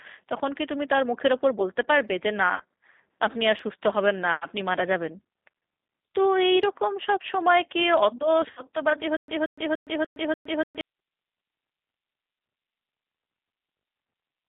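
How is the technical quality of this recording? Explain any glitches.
The technical quality is poor. Three kinds of fault are audible.

Throughout, the speech carries G.729 codec damage at 8 kbit/s. The codec rebuilds the voice from a vocal tract model and a few pulses per frame. The line is limited to about 150 Hz to 3.7 kHz. The result sounds thin, rough and plainly synthetic.

At 2.54 to 2.63 s and again at 8.51 to 8.62 s, there is VoIP packet loss concealed by the speech codec. About 60 ms is missing each time, which fits three lost packets. The decoder stretches its last frame into a fading sound. The voice then stays weak briefly.

From 9.17 to 10.81 s, there is a stutter with silent gaps. A 179 ms fragment repeats five times. Each repeat is followed by about 114 ms of digital silence, giving a steady 293 ms cycle. This likely comes from a stalled stream replaying its last buffer. 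The audio that should have played there is lost.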